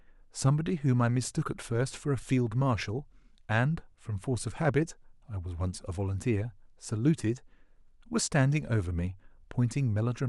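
No technical faults can be heard anywhere in the recording.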